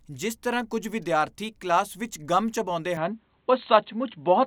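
At 2.97 s the speech suddenly goes dull and boxy, with nothing above 4.2 kHz, a few dB level shift and faint new hiss, likely an input switched to a poorer device.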